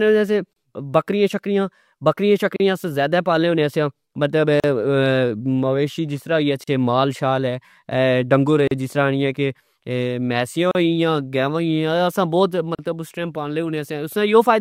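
Separately encoded pieces were joined untrimmed, leaving a gap at each join of encoded pieces: brief silences cut the speech at 0.53 s (31 ms), then at 2.56, 4.60, 6.64, 8.68, 10.71 and 12.75 s (about 38 ms each), roughly every 2 s.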